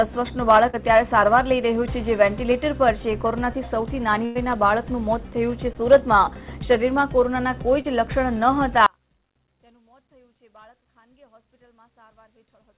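At 0.70 to 0.75 s, 5.73 to 5.76 s and 7.82 to 7.86 s there are short concealed packet losses. About 40 ms, 20 ms and 20 ms of audio never arrived, and the receiver covered each hole by extending the preceding sound before blending back in. Each is heard as a brief smear or wobble rather than a gap. Unlike a burst, these are too short to fade, and only a few hundredths of a second of sound goes missing each time.

From 4.25 to 4.37 s a burst of packet loss takes out about 100 ms in one run. The receiver continues the last sound for nearly that whole span and lets it die away, so it becomes a held buzz or fading hiss. The audio then resumes further along, with the material in between gone. That audible decay and the skip are what set it apart from the brief smears elsewhere.

From 8.86 s to the end the level falls by about 35 dB, leaving only a faint remnant instead of silence. The likely cause is one channel inverted. 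With one channel's polarity reversed, everything shared by both channels cancels when they are summed to mono, and only their small difference survives. A dropout would leave nothing at all, while this keeps a faint residue. Throughout the clip the call path passes nothing above 4 kHz, which fits G.711 mu-law at 64 kbps.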